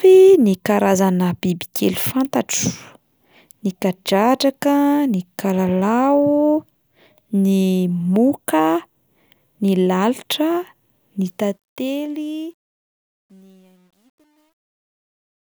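From 11.25 s to the end at 15.58 s, the speech fades out with truncation distortion on a fade. The gain stage keeps too few bits and adds no dither, which fits roughly 10-bit resolution. From 12.76 s the quiet tail turns gritty.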